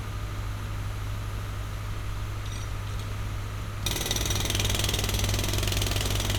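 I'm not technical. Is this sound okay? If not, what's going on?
Yes, it sounds fine.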